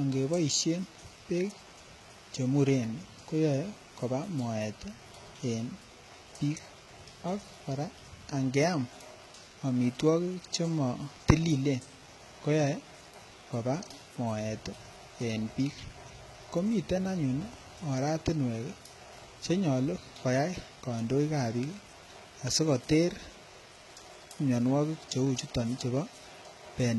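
Speech clip, throughout which the signal was likely squeezed through HE-AAC compression at a very low rate, with heavy damage that fits roughly 16 kbps. Only the lower band is truly coded; the treble is regenerated by copying lower bands upward, so its harmonics no longer line up with the real ones. S sounds come out gritty and lispy, the top end sounds metallic rather than natural, and nothing reaches above 11.8 kHz.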